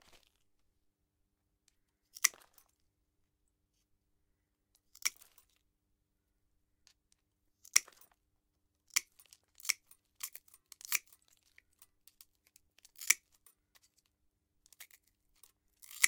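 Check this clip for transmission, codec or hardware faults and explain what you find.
Nothing here points to a problem with how the audio was sent, encoded or played back, so there's nothing to flag.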